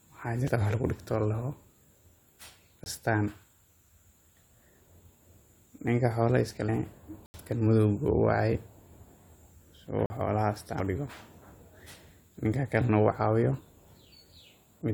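At 0.48 to 0.50 s, damaged data in the compressed stream makes the decoder lose sync and hunt for the next frame header. A spectrogram shows a smeared broadband smudge, and the same happens at 6.68 s and 10.79 s.

Blocks of digital silence fall at 2.84 to 2.86 s (20 ms), 7.26 to 7.34 s (80 ms) and 10.06 to 10.10 s (40 ms). The output buffer likely wasn't filled in time, so the sound cuts out abruptly, a flat line in the waveform. The shortest sounds like a brief gap and the longest like a small hole.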